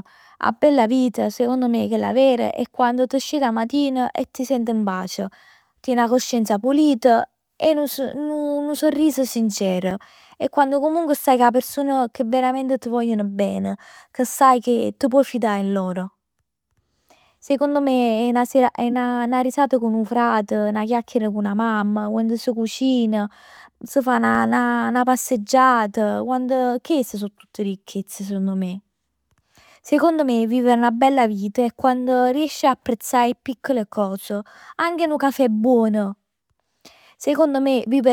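From 8.97 to 10.68 s, CD scratch ticks appear, about seven a second, each a few milliseconds long. They return from 23.11 to 24.51 s. Each disc turn hits a blemish beyond error correction. The player patches the gap, leaving short clicks in the speech.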